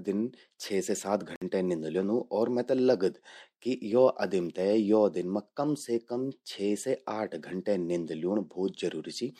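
A Bluetooth stall at 1.36 to 1.42 s cuts this speech to about 57 ms of silence, likely because interference delayed packets until the headphone buffer emptied.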